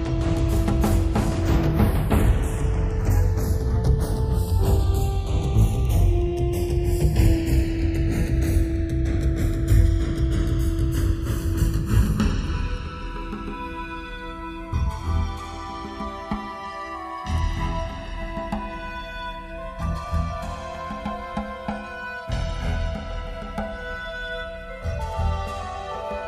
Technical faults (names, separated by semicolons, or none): channels drifting apart